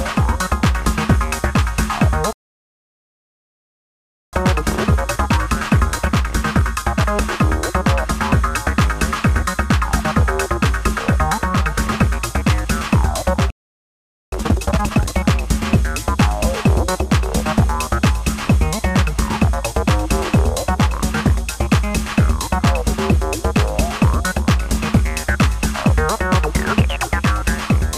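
At 2.33 s the audio cuts out in a playback stall. Silence lasts 2.0 s, until 4.33 s. The player most likely ran short of data or had its output thread blocked. The sound then resumes.

From 4.33 s to 7.33 s comes a time-compressed catch-up. The player trims its backlog by removing small slices and cross-fading the joins. Pitch stays normal, but the audio runs at 1.1 times speed. It sounds slightly rushed.

At 13.50 s a second playback stall hits. The output goes silent for about 0.82 s, to 14.32 s. An underrun or a blocked thread is the likely cause here too.

A second time-compressed catch-up follows, from 14.32 s to 15.12 s. This time it runs at 2.0 times speed. That is a sharp, hurried burst at unchanged pitch.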